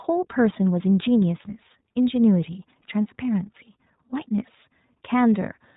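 Speech carries iLBC codec damage from start to finish: nothing above 4 kHz, and a plainly rough, synthetic grain from frame-independent excitation coding, unlike smoother G.711 telephony, fitting 20 ms frames at about 15.2 kbps.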